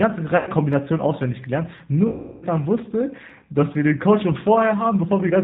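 The whole clip runs through what sounds like the G.729 codec at 8 kbit/s. The speech is rebuilt from a vocal tract filter and a handful of pulses per frame, so nothing gets through above 4 kHz, and the voice comes out plainly rough and a bit synthetic.

At 0.37 to 0.51 s there's VoIP packet loss concealed by the speech codec. Roughly 100 ms of audio went missing, and the decoder filled it by stretching its last pitch and filter into a buzzy tone or coloured noise that fades before real packets returned. The same thing happens again from 2.08 to 2.46 s, and this time it's longer, with about 340 ms lost. The concealment has to carry the gap much further, so the extrapolated sound fades further as the gain drops frame by frame. Because each frame builds on the one before, the voice stays thin for a moment after real packets return.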